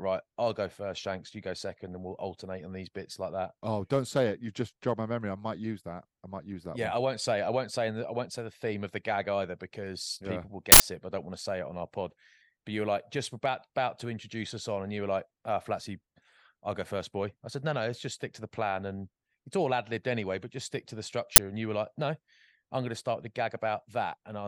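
Uninitialised buffers at 10.72–10.80 s, after "because yeah people will", and 21.36–21.38 s, after "just stick to the", play leftover memory as short, loud digital-noise bursts.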